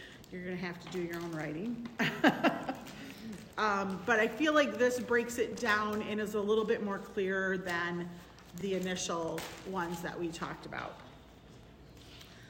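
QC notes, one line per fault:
2.56–2.58 s, 5.58–5.61 s, 8.61–8.63 s and 11.63–11.66 s: overlapping chunks. Each new 3-second chunk starts before the previous one ends, so about 25 ms of sound plays twice at every join. This causes a short stutter-click every three seconds.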